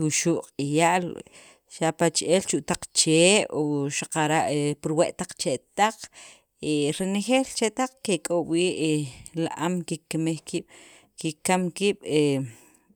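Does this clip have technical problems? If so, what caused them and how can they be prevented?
Yes. A resampler restarted on every block, from 2.4 to 4.4 s, puts a steady tick into the speech ten times a second. Each 100 ms block was converted separately, likely from 44.1 kHz to 48 kHz, so every block edge carries a small error. Prevent it by keeping the resampler's filter state running across blocks.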